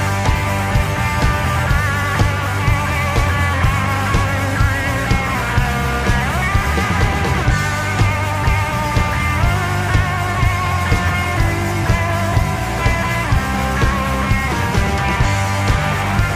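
No technical faults are audible anywhere in this audio.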